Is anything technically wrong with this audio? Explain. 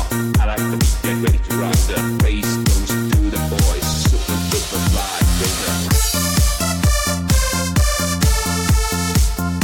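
Yes. Hard clipping runs through the whole clip: peaks about 3 dB over the limit are sliced flat, a few percent of samples, giving brief crackle rather than soft, rounded saturation.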